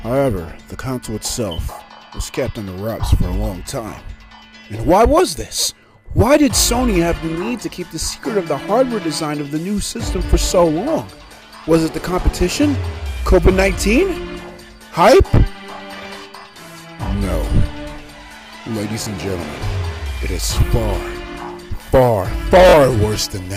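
Two short Bluetooth stutter events here: at 19.04 to 19.07 s about 21 ms of audio goes missing, and at 22.69 to 22.74 s about 43 ms, which fits one and then two lost packets, with the receiver replaying its last slice before the sound jumps ahead.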